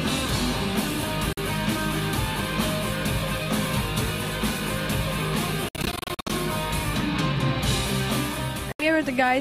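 Silent holes at 1.33, 5.69–6.32 (scattered gaps, longest 61 ms) and 8.72–8.86 s, likely Bluetooth dropout: lost packets leave sharp-edged blank columns in the spectrogram, and the audio resumes further along.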